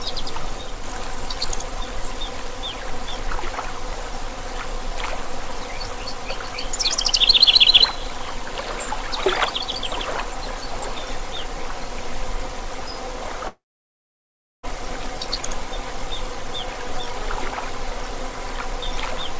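At 13.48 s the sound cuts out until 14.65 s. The last sound before the gap lingers as a short buzzy or hissy tail that fades quickly. About 1.05 s of near silence follows. The audio then resumes, but roughly 1.16 s of material is simply gone. This is most likely a long network dropout: packets stopped arriving and the receiver filled the gap itself. Throughout, nothing is heard above 8 kHz, which fits a G.722 call codec at 64 kbps.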